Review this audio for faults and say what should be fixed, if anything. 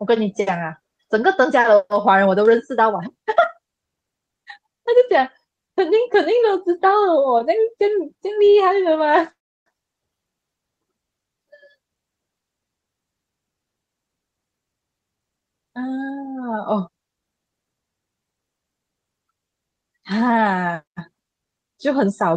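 Packets arrived late three times around 8.2 to 8.6 s, and the jitter buffer ran dry each time. These are short stalls from late packets: the receiver held the last sound for 19 ms at 8.17 to 8.21 s, 29 ms at 8.45 to 8.50 s, and 37 ms at 8.50 to 8.56 s, so the speech briefly sticks.

Packets were likely delayed in transit, leaving the buffer empty from 9.32 to 9.68 s. The result is a call audio freeze: about 343 ms is filled in, mostly as silence (around 330 ms). The speech then resumes where it paused, so a gap has been inserted.

The jitter buffer then held more audio than it aims for and had to shed the excess delay. This jitter buffer speed-up runs from 13.30 to 16.19 s at 112% speed. It cuts roughly a third of a second in small pitch-period slices, so the speech sounds hurried at unchanged pitch.

To prevent all three, stabilise the network path and use an adaptive jitter buffer with enough headroom to absorb late packets. 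Its catch-up should also be spread more gently.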